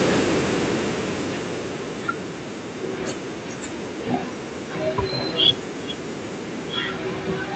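Speech clip with automatic gain falling from 0.05 to 2.31 s: the level starts loud, then the AGC pulls its gain down by about 13 dB, so the room noise sinks along with the speech. That shared drop separates it from a compressor, which would leave the background steady. The call-codec path tops out around 8 kHz.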